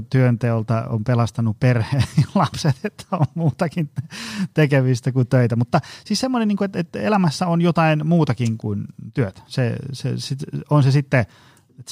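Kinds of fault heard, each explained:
No faults detected in this speech recording; nothing in the signal path calls for attention.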